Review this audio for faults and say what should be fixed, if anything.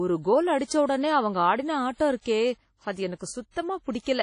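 The speech rings and sounds washy throughout, with a hiss that swells and fades with the signal. Nothing is present above 10.1 kHz. The likely cause is WMA compression. Long transform blocks smear quantisation noise across time, and the damage fits a low bitrate near 32 kbps. To prevent it, encode from the original recording at a much higher bitrate, or use a lossless format.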